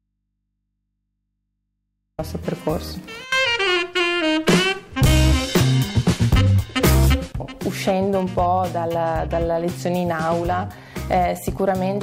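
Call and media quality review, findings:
Audio dropout to a faint residue, 0.00 to 2.19 s: already under way when the clip opens, only mains hum about 55 dB below the signal, then an abrupt return at 2.19 s. Likely an upstream source or link loss with the downstream input left open.

Hard clipping, throughout: harsh crackle on loud peaks, a small fraction of samples flattened. The signal is driven about 7 dB past what a gain or conversion stage can pass, so peaks are cut flat and add high-frequency harmonics.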